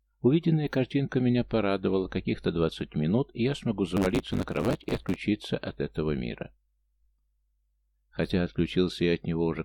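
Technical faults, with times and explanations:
3.96 to 5.16 s, block size mismatch (truncated): a 100 Hz buzz sits on the sound, which also runs 1.16 times fast at roughly normal pitch. One stage writes longer blocks than the next reads, which fits 512-sample blocks, so each block's tail gets chopped off.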